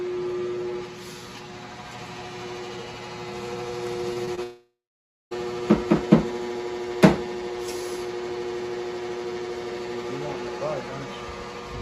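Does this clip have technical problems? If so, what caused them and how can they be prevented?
Yes. Around 4.13, 4.25 and 4.35 s there's short concealed packet loss. Each time about 20 ms of audio arrived too late, and the receiver patched it by extending the previous sound, giving quick smears. Better jitter buffering or forward error correction would prevent this.

Right after, from 4.43 to 5.33 s, comes a long network dropout, likely a link stall. The receiver continues the last sound briefly as it fades, then goes silent for about 0.58 s, and roughly 0.88 s of audio is lost outright. A steadier connection, or wired instead of Wi-Fi, would prevent this.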